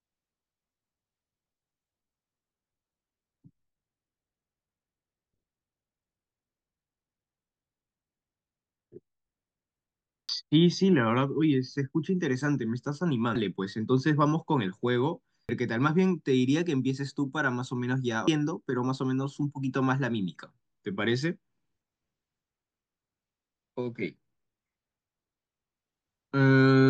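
At 10.29, 13.35, 15.49, 18.28 and 23.66 s the speech is broken by brief glitches typical of damaged data in a compressed stream. At each point some of the encoded bytes are wrong, so the decoder misreads the affected frame, loses its place in the bitstream and resynchronises at the next valid frame header. Each event is heard as a short chirp or blip cutting across the speech.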